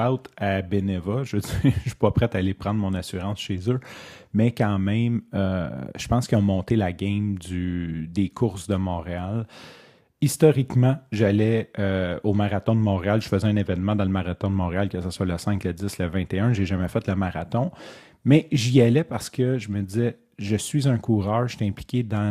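From 7.29 s, just after "qu'ils ont monté la", to the end of the clip, periodic clock jitter sets in: interference wobbles the converter's sampling clock at a steady rate of around 300 Hz. Each component of the speech picks up sidebands roughly 300 Hz above and below it, strongest on the higher frequencies. The result is a rough, metallic edge riding on the speech that drops away in the pauses.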